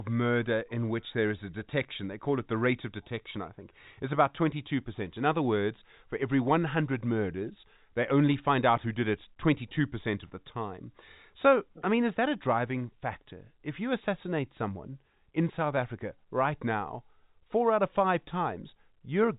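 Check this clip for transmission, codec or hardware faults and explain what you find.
Nothing wrong can be heard anywhere in this recording.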